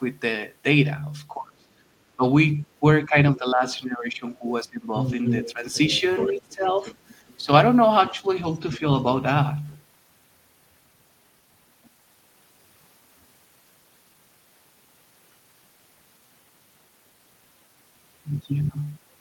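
From 1.34 to 4.97 s the speech is suppressed in double talk: roughly two seconds of it dip by up to about 20 dB, likely because the echo canceller mistook simultaneous far-end talk for echo and attenuated both. The waveform shows sagging, gapped envelopes, and the spectrogram shows upper harmonics thinning.

From 4.97 to 7.37 s the other side's voice is leaking through, only about 5 dB under the talker. The residual echo the canceller likely failed to remove appears as a second, fainter harmonic pattern overlapping the main one.

Within that stretch, from 5.53 to 6.85 s, the speech is again suppressed, by up to about 15 dB. Brief, shallower dips of a few decibels follow at 7.39 to 7.49 s and 8.11 to 8.84 s.

Faint leaks of the other side's voice also occur at 8.04 to 8.10 s and at 11.85 to 11.90 s. They show as weak, isolated streaks on the spectrogram.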